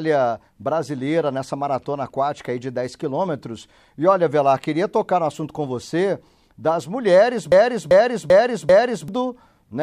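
A speech clip with a broken-record loop from 7.52 to 9.08 s. A fragment of about 0.39 s plays four times in a row, each copy identical and butted against the next. The speech that belonged in that stretch never arrives. Instead the same slice stutters until the loop ends. The likely cause is a player, encoder or stream that stalled and kept resending the last piece it held.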